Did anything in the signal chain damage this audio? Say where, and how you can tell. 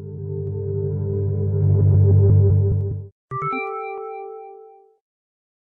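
Yes: clock drift buffer slips at the driver or buffer stage. Regular clicks recur every 1.17 s from 0.47 to 5.15 s, likely from two clocks roughly 150 ppm apart forcing a handful of samples to be dropped or repeated. A spectrogram shows thin vertical broadband lines, and the waveform shows small steps.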